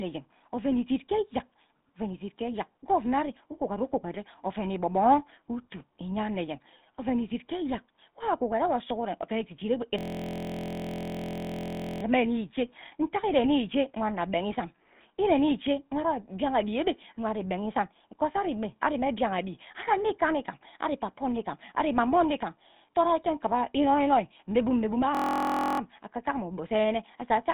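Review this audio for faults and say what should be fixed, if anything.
The whole clip carries GSM full-rate codec damage. The speech sounds buzzy and gravelly. Nothing sits above about 3.8 kHz, and the band runs roughly 150 Hz to 3.7 kHz. The codec rebuilds the voice from a coarse pulse excitation at 13 kbps. To prevent it, use a wideband codec or capture the source before the phone network.

A system hang loop appears from 9.99 to 12.03 s and again from 25.15 to 25.80 s. One 23.22 ms fragment repeats many times, giving a steady buzz at 43.1 Hz. That length fits a 1024-sample buffer. The driver stalled while the hardware kept replaying its ring buffer. To prevent it, fix the driver or system stall so the buffer keeps getting fresh audio.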